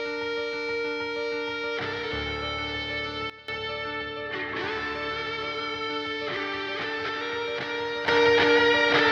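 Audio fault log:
3.30–3.48 s and 8.08 s to end, sudden gain jump: the music drops by about 16 dB, then later rises by about 10 dB. The change is instant, with no ramp. Likely a gain setting applied between samples, so the music and background shift together.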